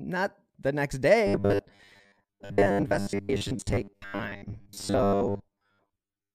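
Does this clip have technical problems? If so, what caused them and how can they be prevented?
Yes. From 1.27 s to the end, the speech becomes a rigid 100 Hz metallic buzz. This is robotic sound from repeated short buffers, likely caused by roughly 10 ms chunks replayed while most new audio is skipped. Prevent it by ensuring steady, timely audio delivery with adequate buffering.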